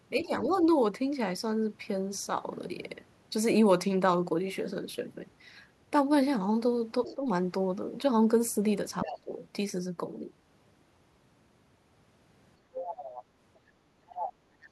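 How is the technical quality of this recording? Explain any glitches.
The recording has two recurring echo problems.

Speech suppressed in double talk occurs at 0.18–0.56 s, 7.11–7.25 s and 9.06–9.30 s. The talker dips by up to about 15 dB. The echo canceller likely could not separate the talker from loudspeaker echo and turned both down.

The other side's voice leaks through at 0.23–0.57 s, 7.05–7.14 s, 9.01–9.19 s, 12.75–13.58 s and 14.07–14.33 s. It is faint at first, roughly 20 dB down, and grows to around 10 dB below the talker by the end. This is likely residual loudspeaker sound the echo canceller left in the microphone signal.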